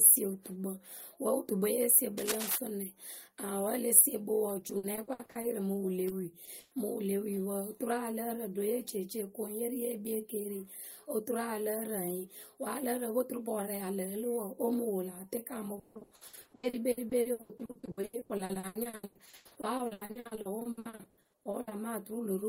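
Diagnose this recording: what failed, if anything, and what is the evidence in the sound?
The stage here is analogue wiring. From 2.17 to 2.58 s a dense, uneven scratching sits over the speech, only a little below its level. It sounds like cable scratch noise, most likely from a worn cable, connector or control being moved. The contact resistance jumps about rapidly as it shifts. That injects ragged bursts of noise for the short time it moves.

The next fault is in the network stage: repeated packet loss, heard as robotic sound. From 4.59 to 5.45 s, gaps come one after another, longest 60 ms, about 320 ms missing in all. More than a third of that stretch is patched. A longer run from 15.75 to 21.73 s is worse. Half of it is concealed, about 3.0 s, with gaps up to 160 ms. Each hole is filled by extending the last sound. The speech turns choppy, with pieces missing.

Two short concealed packet losses follow, also on the network side. 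They fall at 6.09 to 6.13 s and 6.45 to 6.49 s, each hiding about 20 ms. The decoder missed that audio in time. It bridged the hole by carrying the previous sound forward, then blended back into real audio. Each is heard as a brief smear or wobble. A short consonant there can drop out.

A burst of packet loss hits from 6.59 to 6.73 s. About 120 ms never arrives, and the gap is filled rather than left silent. The receiver keeps the last sound going and lowers it as the gap runs on. A voiced sound becomes a held buzz, and unvoiced sound becomes a fading hiss. Speech then resumes further along. The audio in between is simply gone.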